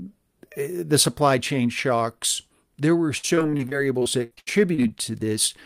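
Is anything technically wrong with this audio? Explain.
Yes. From 3.17 to 4.92 s there is repeated packet loss (robotic sound): packets kept going missing, and each hole was papered over by extending the preceding sound. About a dozen short gaps, the longest 76 ms, leave roughly a quarter of that stretch concealed, so the audio turns choppy with pieces missing.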